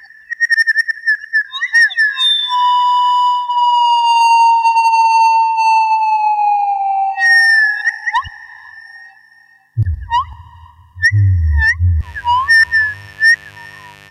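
From 12.00 s to the end at 14.11 s, a steady, raspy buzz sits about 30 dB below the sound: mains buzz, switching spikes in each 50 Hz cycle.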